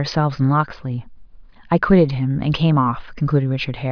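No technical faults can be heard anywhere in this speech recording. The audio runs without interruption, with nothing that points to a problem in the chain that carried it.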